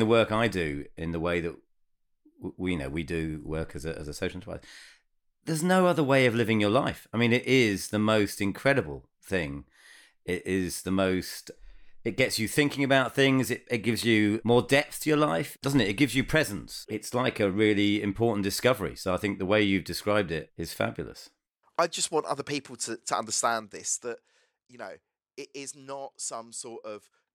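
From 23.42 to 24.40 s a fine ticking, zipping buzz rides on the speech as its level falls by about 10 dB. This is zipper noise: the gain drops in unsmoothed steps, around 200 a second, each leaving a tiny click.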